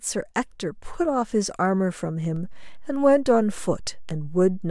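A speech recording with a DC step at 2.36 s. The waveform's zero line jumps by about -33 dBFS and stays shifted to the end of the clip, the kind of shift a converter recalibrating or an offset-carrying input being switched in would cause. The jump sounds like a single low thump or click while the speech continues unchanged. Unlike a dropout click or a plosive pop, the baseline never returns to zero.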